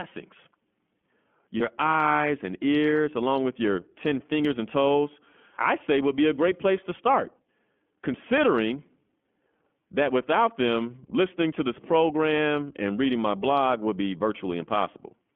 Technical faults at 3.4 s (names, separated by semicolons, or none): iLBC codec